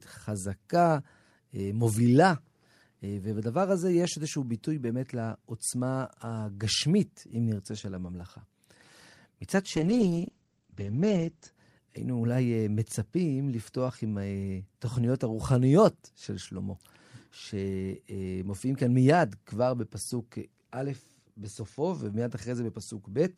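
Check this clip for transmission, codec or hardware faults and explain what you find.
One transmission fault is present: a call bitrate drop from 9.77 to 11.58 s. The encoder's bit budget collapsed, with the coarse coding pointing to a fall from around 48 kbps to about 13 kbps, held for 1.7 s. Speech turns rough and muffled as the top end vanishes. A spectrogram shows energy above 8 kHz cut off sharply where it previously reached 20 kHz.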